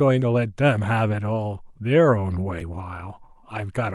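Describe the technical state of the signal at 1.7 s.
At 1.7 s the speech signal is intact, with no dropout, click, distortion or other technical fault audible at that point.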